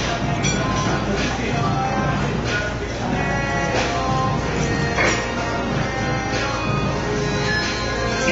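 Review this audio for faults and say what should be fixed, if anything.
The whole clip has a dull ceiling, with nothing above 7.6 kHz and clearly audible codec damage, likely AAC compression at a low bitrate, fitting about 24 kbps AAC-LC. To prevent this, encode at a higher bitrate or keep an uncompressed master.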